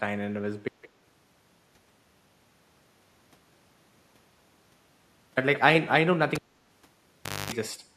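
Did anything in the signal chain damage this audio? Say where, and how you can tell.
Yes. At the input or transport stage, the audio dropout to silence from 0.68 to 5.37 s is likely a lost input: about 4.7 s of silence with no room tone.

In call processing, an echo leak from a loudspeaker side's echo canceller likely let a 170 ms delayed copy through: faint at 0.82 to 0.89 s, far louder at 5.55 to 5.59 s.

In the analogue wiring, a cable pulled and plugged in between 6.35 and 7.52 s gives a pop, then 1.12 s of near silence, 0.24 s of 50 Hz mains buzz, and a second pop.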